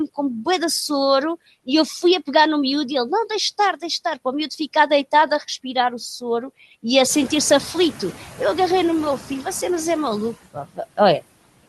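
Throughout the clip the background falls away between phrases and swells back under them. These are noise suppressor artifacts. The suppressor pulls down the bands it judges to be steady noise by about 19 dB, frame by frame, so its gain keeps shifting with the signal.

From 7.09 to 8.11 s the background suddenly comes through much louder before settling again. The room noise jumps by about 14 dB at around 7 s and then sits about 17 dB below the speech. This is the noise suppressor catching up. Its noise estimate lags the jump, so at first it removes only about 6 dB, and it takes about 1.02 s to adapt and bring the noise back down.

Between 10.54 and 10.79 s part of the speech sounds swallowed and faint, with some sound dropping out for about a tenth of a second in total. This is speech cut by the noise suppressor. It mistook those parts for background and turned them down with it, by as much as about 18 dB.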